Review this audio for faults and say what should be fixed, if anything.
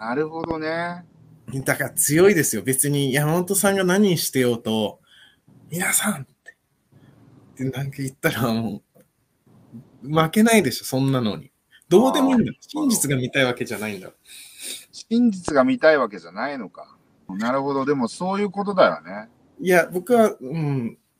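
There's a loud pop pair at 0.44–0.53 s, about 10 dB over the sound, and a single one at 15.48–15.51 s, about 15 dB up, likely a voltage spike from a plug or switch. Fix it by keeping cables seated and switching gear before recording starts.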